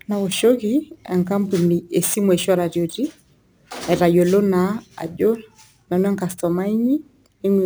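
From start to finish the speech carries crude rate conversion. Samples were repeated by nearest-neighbour picking rather than filtered, which fits a step from 32 kHz up to 44.1 kHz. The irregular repeat pattern leaves an error roughly 25 dB below the speech, heard as a gritty, inharmonic fizz riding on louder and brighter syllables. A spectrogram shows faint tones that don't line up with the voice harmonics, and the zoomed waveform shows small stair-steps.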